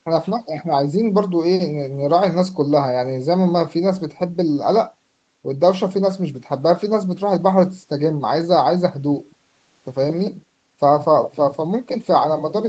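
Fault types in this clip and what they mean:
No faults can be heard in this speech recording. It has gone through a call's microphone processing and codec, and the sound stops at about 8 kHz, as expected for that path.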